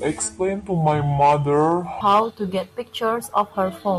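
Section at the wrong speed, 0.0 to 2.01 s, in a short speech recording: the opening plays at about 0.75 times normal speed, so the speech drags and drops about five semitones before snapping back, likely from playback against the wrong clock.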